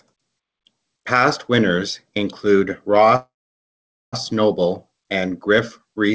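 From 3.16 to 4.16 s, speech halts into a fading fill then silence, and resumes intact: a call audio freeze, likely delayed packets draining the jitter buffer.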